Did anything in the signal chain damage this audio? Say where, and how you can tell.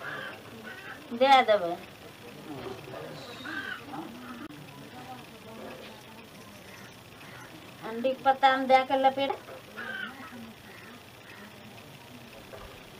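Yes. There is a CD skip at 4.47 to 4.49 s and another at 9.29 s, at the playback stage. Each is a tick with a very short mute, a few tens of milliseconds at the first and only a few milliseconds at the second, before the sound resumes from a different point. The player's laser has jumped to another turn of the disc's spiral, so the audio continues out of place, displaced by whole revolutions.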